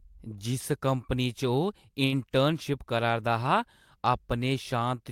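At 2.05 to 2.15 s, a short stall from a late packet: the jitter buffer emptied, so the last sound was held for 67 ms before playback resumed, nothing lost. It sounds frozen, with a slight buzz or dip; a spectrogram shows flat, unchanging harmonics, the waveform a repeating cycle.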